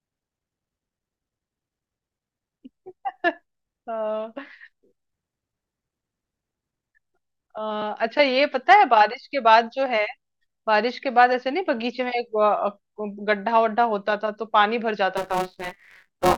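From about 15.17 s to the end, there's buffer tearing: writer and reader have slipped, so under half of each period replays audio roughly 20 ms stale. That gives a robotic 188 Hz rattle over the speech, which fits a 256-sample buffer.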